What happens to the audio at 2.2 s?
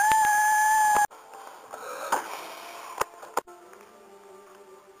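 At 2.2 s the audio falls inside a run of periodic USB or driver dropouts that lasts from about 0.95 s to 4.96 s, though 2.2 s sits between two of the gaps. Every 2.0 s, something seems to stall the USB bus or audio driver, and a couple of milliseconds of audio are lost and replaced by silence, about three times in all. A gap that falls during signal sounds like a tick or pop. On a waveform it shows as a brief flat, near-silent stretch, and on a spectrogram as a thin vertical broadband line.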